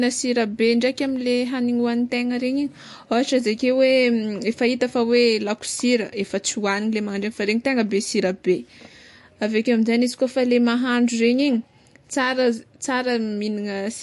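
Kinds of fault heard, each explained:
MP3 compression: the speech has nothing above about 11.3 kHz, with plainly audible watery swirl and smeared consonants, likely from a low bitrate around 50 kbps; flickering frame-to-frame artefacts distinguish it from simple low-pass filtering.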